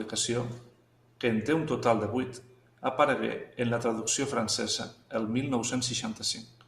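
No technical faults can be heard in this recording.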